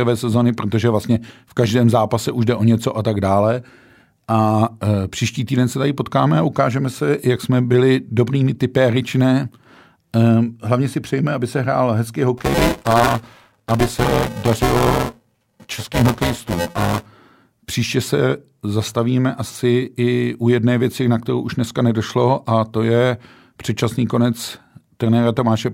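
Buffer tearing runs from 12.37 s to 17.06 s in this speech. The playback write position and the hardware read position have drifted until they cross inside each period. Roughly a third of every buffer repeats audio from about 10 ms earlier, with hard joins on either side. The result is a steady robotic buzz at 345 Hz. That rate fits a 128-sample buffer, and the buzz is present only while there is signal.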